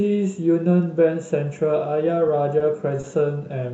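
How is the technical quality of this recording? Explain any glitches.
Two brief glitches late in this speech recording, both heard through a call codec whose top end stops around 8 kHz:

At 2.59–2.63 s and again at 3.01–3.06 s, a sound hangs on slightly too long with a faint buzzy wobble. These are short stalls from a late packet: the jitter buffer ran dry, so the receiver stretched the last audio by about 20 ms and then 30 ms, and resumed where it left off. Nothing is lost.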